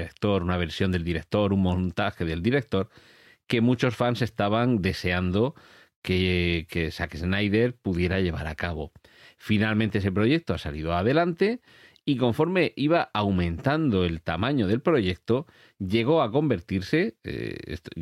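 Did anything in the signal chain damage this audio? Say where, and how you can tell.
No, no damage is audible.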